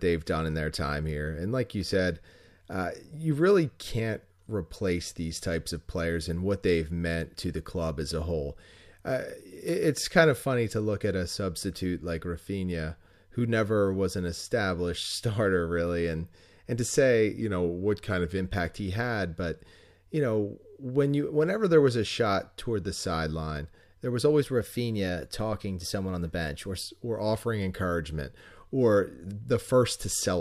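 After "and and to say", from 17.41 to 18.38 s, the speech slows by about 6% and drops 107 cents, roughly a semitone, then snaps back before "he had but you". This is likely a drift correction step, a clock-matching resampler briefly changing rate to manage its buffer. From 24.41 to 26.81 s, between "the sideline there was" and "or offering encouragement or", it runs about 6% fast and 100 cents sharp. Unlike wow or flutter, the pitch holds steady and then jumps back.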